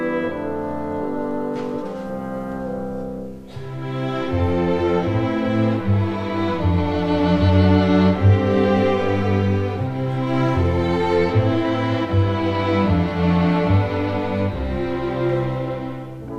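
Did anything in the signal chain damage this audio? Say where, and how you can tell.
No, no signal-chain damage heard.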